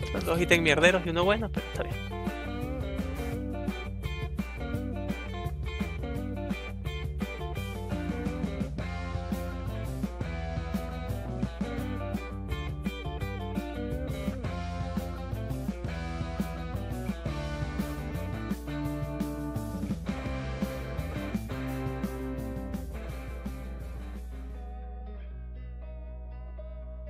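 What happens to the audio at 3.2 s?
A ground loop or nearby power transformer is coupling the 60 Hz supply into the signal path, so at 3.2 s, as everywhere in the clip, a steady mains hum sits under the sound: a constant low tone with some low harmonics, only slightly quieter than the audio itself.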